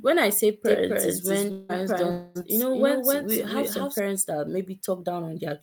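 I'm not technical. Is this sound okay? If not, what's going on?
No. Starting at 0.65 s, just after "when I say", a doubled audio track appears, likely because the same speech was picked up a second time through a slower route. A copy about as loud as the original trails roughly 0.3 seconds behind, so everything sounds echoed, until it stops abruptly at 3.99 s.

There are also two long network dropouts, at 1.51 to 1.72 s and 2.11 to 2.38 s, likely where the connection briefly stopped delivering sound. About 0.18 s and 0.24 s of speech are lost, covered by a fading buzz or hiss instead of silence.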